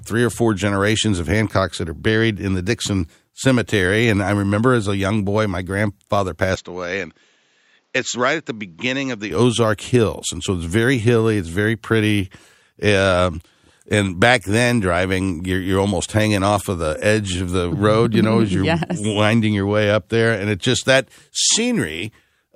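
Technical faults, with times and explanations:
6.55–9.31 s, input switched to a poorer device: just after "young boy my grandfather" the sound abruptly turns duller, with nothing above 7.6 kHz, drops about 5 dB in level and gains a faint new background noise, then clears again at 9.31 s with no gap at either change. This is likely a change to a different, narrower-band microphone. Unlike a plain low-pass filter or codec bandwidth drop, the tone, level and noise floor all change together.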